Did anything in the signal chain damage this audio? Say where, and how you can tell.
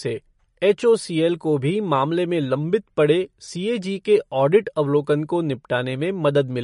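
Yes, at the codec stage, likely MP3 compression. Throughout the speech, nothing sits above 10.6 kHz, and the damage is plainly audible as watery, swirling texture on sibilants, which fits a bitrate around 40 kbps. A plain low-pass filter would dull the sound without this frame-to-frame flicker.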